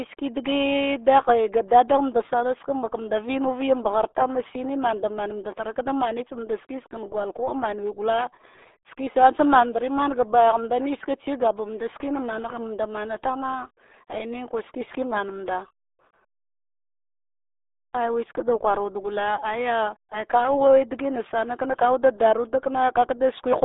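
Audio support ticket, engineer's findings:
Speech muffled and gargly throughout, band limited to 300 Hz–3.6 kHz, nothing above 3.8 kHz. Component: RealAudio 14.4 codec. Low-rate dial-up speech coder, consistent with an 8 kbit/s stream. Heavy coding damage, fine spectral detail discarded and the remaining band crudely modelled.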